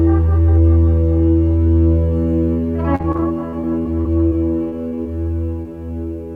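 From 2.95 to 4.33 s the music shows repeated packet loss (robotic sound). Around ten gaps, the longest about 40 ms, are each patched by extending the preceding audio, so roughly a fifth of that stretch is synthetic fill and the music turns choppy. A second burst of repeated packet loss runs from 4.69 to 5.07 s. Its five or so gaps are shorter, none over 24 ms, but they are denser, leaving about a quarter of the span concealed.

Between 5.62 and 5.67 s a short concealed packet loss removes roughly 20 ms of audio. The decoder continues the last sound across the hole and crossfades back into the real signal, heard as a brief smear or wobble.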